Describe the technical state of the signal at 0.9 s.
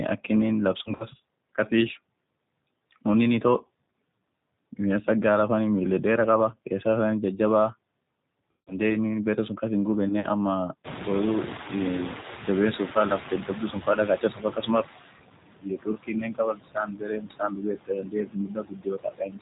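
VoIP packet loss concealed by the speech codec affects 0.84 to 1.06 s: about 80 ms of audio went missing in gaps spread over 160 ms, the longest 40 ms, which fits four lost 20 ms packets. The decoder stretched its last pitch and filter into a fading sound, leaving the speech weak and distorted until it recovers.

Underneath, the G.729 codec rebuilds the speech at 8 kbit/s from a vocal tract filter and sparse pulses, cutting everything above 4 kHz and giving a plainly rough, synthetic quality.

Noise suppressor artifacts are also present, pulling steady noise down by about 20 dB frame by frame, so the noise sinks between the words and rises under them.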